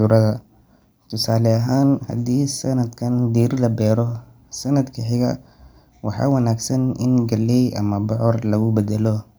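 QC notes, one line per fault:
No faults found.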